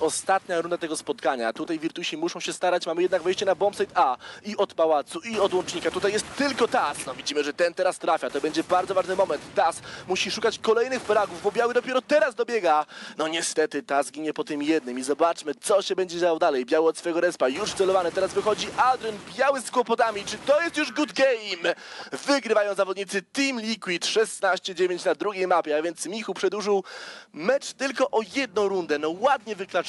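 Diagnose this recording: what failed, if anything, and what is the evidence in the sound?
Nothing failed in this recording.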